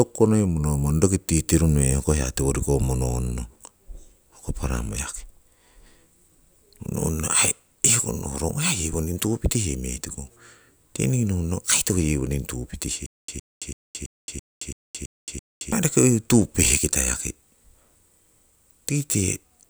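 From 13.06 to 15.72 s the speech breaks into a stutter with silent gaps: one 113 ms fragment plays eight times, each followed by 220 ms of digital silence, likely from a stalled stream. The waveform shows identical blocks between flat lines; the spectrogram shows repeating slices with blank columns.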